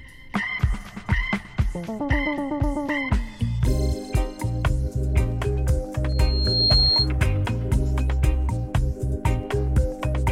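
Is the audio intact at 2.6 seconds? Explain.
Yes, the audio is intact at 2.6 seconds, with no dropout, click, distortion or other fault to be heard at that point.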